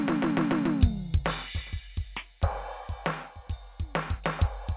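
No technical faults occur in this music, which carries the narrowband sound of a call path with nothing above 4 kHz, consistent with a telephone codec such as G.711 A-law.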